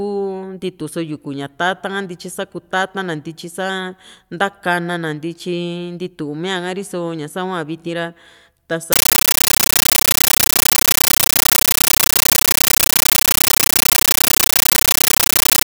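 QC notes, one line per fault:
8.93–15.67 s, compressed stream played as audio: an undecoded AC-3 (Dolby Digital) bitstream is output as ordinary samples, so the speech is replaced by loud chattering static, 13.3 ms noise bursts separated by silent padding and repeating 31.25 times a second.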